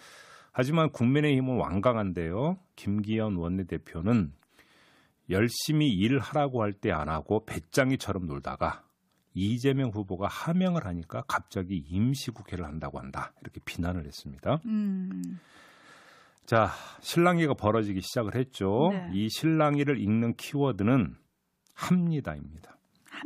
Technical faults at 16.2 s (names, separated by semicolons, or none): none